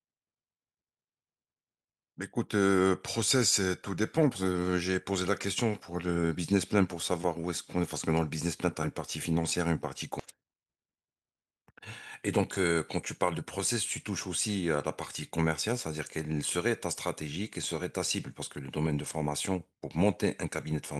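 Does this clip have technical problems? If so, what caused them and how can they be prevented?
Yes. At 10.2 s the speech lurches forward with no gap, roughly 0.7 s of audio gone, a skip ahead where a stretch of waiting audio was discarded. Keeping jitter buffers from overflowing prevents it.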